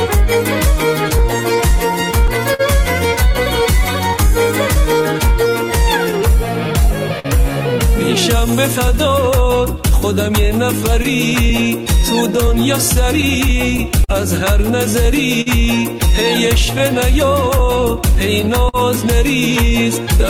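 Clock drift between sender and receiver runs under the whole clip. The sender's clock is slow by roughly 4 percent, so the receiving jitter buffer keeps draining and never settles. The receiver can't lock onto a steady rate, and small timing hiccups recur irregularly throughout. On a waveform there is no single visible event. Instead, minor discontinuities in rhythm appear across the full length, which shows up as unevenly spaced joins on a spectrogram.

Repeated timing corrections begin at 0.88 s and continue to 20.04 s. To keep pace with the slow sender, the receiver repeatedly stretches short pieces, all in the same direction. Playback runs at 99 percent speed, and a bit under a third of a second is added in total. The tempo sounds faintly unsteady, with slight hitches. A spectrogram shows occasional smeared or doubled slivers where segments were extended, spaced unevenly rather than periodically.

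A short stall from a late packet occurs at 2.54 s. The packet arrived late, the buffer ran empty, and the receiver held the last sound for 51 ms until the packet arrived. Nothing is lost; playback resumes from the same point. It is heard as one sound lingering a touch too long, with a slight buzz or dip. On a spectrogram, the harmonics run flat and horizontal for that instant, with a small energy dip in the waveform.

Scattered short gaps appear first between 4.45 s and 7.27 s: about four small holes, each patched by continuing the preceding sound, adding up to roughly a tenth of a second. The second, denser stretch runs from 11.03 s to 18.76 s, with around fifteen such gaps filling roughly 300 ms. In both stretches the longest patch is around 50 ms, and about 3 percent of each span is concealed. They are heard as brief ticks and smears. A spectrogram shows thin vertical seams with briefly frozen, blurred spectral content at each patch.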